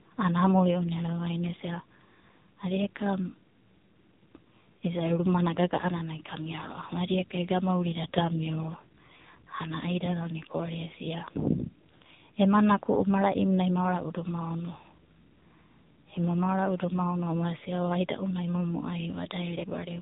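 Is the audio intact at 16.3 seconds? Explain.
No. At 16.3 s the speech is still inside the AMR narrowband mobile codec damage that runs through the whole clip. This codec rebuilds the voice from a vocal-tract model excited by 2 to 10 pulses in each 5 ms, and the heavy, buzzy, synthetic texture points to a very low mode, around 5.9 kbps. Nothing above about 3.8 kHz survives, so sibilants and breath are dulled and the speech sounds boxed-in and telephone-like.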